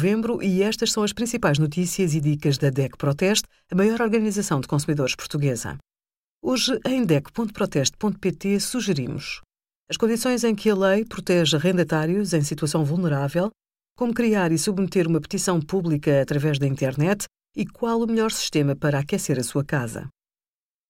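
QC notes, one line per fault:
No faults found in this speech clip. There is nothing to log.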